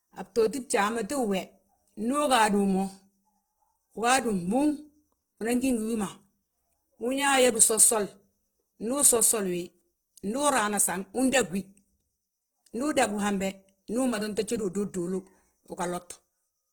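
Right from the start and all the way through, the speech has a rough, grainy texture. Voiced sounds come out noisy rather than clean, and the high end is filled with a fizzy hash. That points to Opus compression, likely running in its music mode at a low rate, something around 16 kbps. Bandwidth stays full, but the encoder is stuffing starved bands with folded or noise content instead of leaving gaps, so you get grit rather than swirl.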